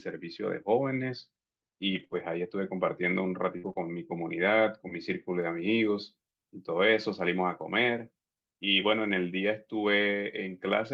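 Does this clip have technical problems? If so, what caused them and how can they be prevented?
Yes. Between 1.91 and 3.79 s there are scattered short gaps: about three lost or late packets, the longest around 50 ms, with 100 ms missing in total. Each hole was patched by stretching the preceding sound, giving brief hiccups. A spectrogram shows small smeared, repeated patches; the waveform shows short copied cycles. A larger jitter buffer with forward error correction would prevent this.

From 5.42 s to the end, pre-emphasis is left on. The treble boost from the CD 50/15 µs curve was never undone, lifting 10 kHz about 8 dB relative to 1 kHz, so the speech turns thin and sibilant. A spectrogram shows the upper bands abruptly brighter from 5.42 s. Applying matching de-emphasis on playback prevents it.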